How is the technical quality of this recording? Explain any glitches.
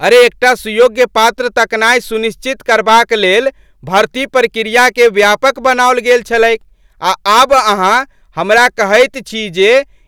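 The recording is marred by hard clipping throughout. The speech was driven about 9 dB past the channel's limit, flattening the tops of a few percent of samples, so every loud peak carries a harsh, crackling fuzz.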